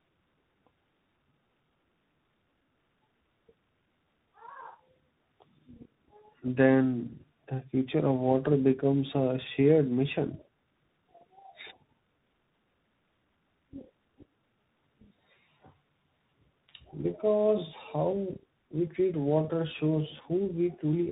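Speech here passed through tandem speech coding, decoded and re-encoded at a link boundary. The sound points to two speech coders in a row, likely iLBC then CVSD, each re-coding the other's degraded output. Throughout, it sounds rough, warbly and muffled, with nothing above 3.8 kHz.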